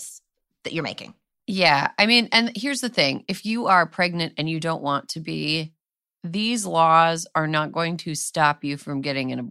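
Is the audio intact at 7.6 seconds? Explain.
Yes, the speech is intact at 7.6 seconds, with no dropout, click, distortion or other fault at that moment.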